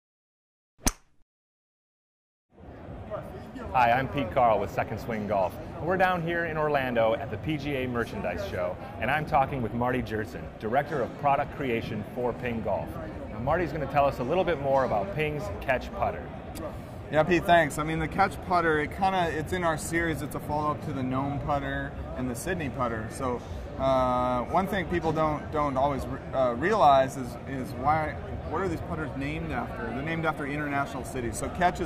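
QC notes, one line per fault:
No faults detected.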